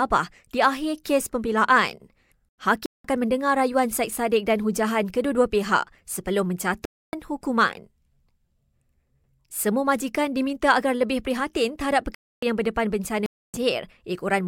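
Corrupt frames muted in this speech clip: damaged compressed frames were rejected by the decoder and replaced with silence, cutting abrupt holes at 2.50–3.04 s (after "di akhir kes pembelaan", before "mendengar rayuan"), 6.85–7.13 s (after "pihak sebelum"), 12.15–12.43 s and 13.26–13.57 s (after "yang berdepan"), with timing preserved.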